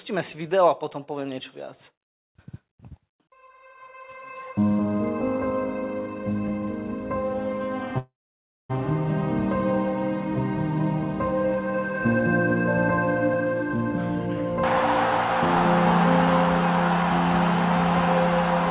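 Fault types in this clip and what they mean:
call audio freeze: From 7.98 to 8.71 s the sound stops advancing. The last fragment is drawn out as a fading buzz or hiss, then about 580 ms of silence follows, and the audio resumes exactly where it stopped. This is likely because packets stalled and the jitter buffer ran empty. Nothing is lost, but later audio arrives 0.71 s late. A waveform shows a decaying tail then a flat gap. A spectrogram shows smeared bands fading into a blank column, all below 4 kHz.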